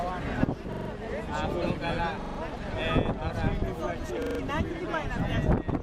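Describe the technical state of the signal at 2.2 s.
At 2.2 s there's a repeated buffer, running from 2.22 to 2.39 s. New audio arrived late, so the same 43 ms slice got replayed four extra times, which fits a 2048-sample buffer. It comes across as a quick stutter with hard joins, and essentially nothing is skipped.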